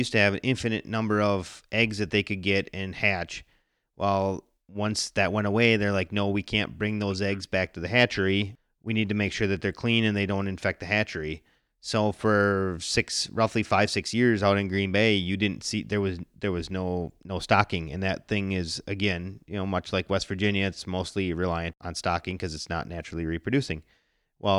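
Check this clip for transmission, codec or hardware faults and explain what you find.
No faults can be heard anywhere in this recording.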